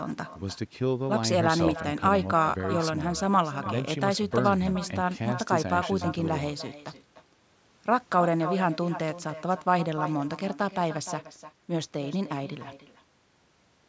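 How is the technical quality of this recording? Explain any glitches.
The recording has a persistent problem: an echo with no canceller, running the whole way through. Every phrase gets a second, fainter copy trailing about a third of a second behind. The far end was almost certainly playing the call out of a loudspeaker, and their microphone caught it and sent it straight back, with no echo cancellation to strip it out. The return sits about 13 dB below the direct speech, so it sounds thin. The call-style microphone processing is audible too, with the lowest bass trimmed and nothing above 8 kHz.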